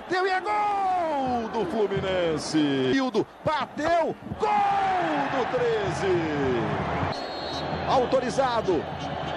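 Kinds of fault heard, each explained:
No technical faults can be heard anywhere in the clip.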